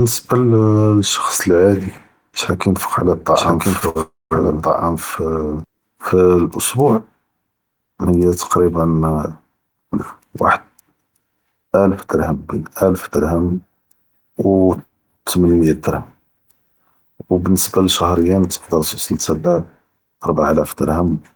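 Speech with four network and mixing faults. From 3.35 to 5.64 s a doubled audio track appears, a full-band copy about as loud as the original and roughly a second behind, likely from a second capture path; the waveform shows the same shapes repeated, starting and stopping abruptly. Short stalls from late packets at 3.79 s (16 ms held) and 3.89 to 3.97 s (61 ms) stretch a sound, visible as smeared, flat spectrogram columns. A call audio freeze from 4.01 to 4.33 s, likely from packets held up in transit, extends the last sound as a fading buzz, then about 180 ms of near-silence appears as a blank band before the speech resumes where it stopped. A jitter buffer speed-up from 10.74 to 11.78 s runs the speech 13% faster at unchanged pitch, cutting around 150 ms and compressing the syllable spacing on the waveform.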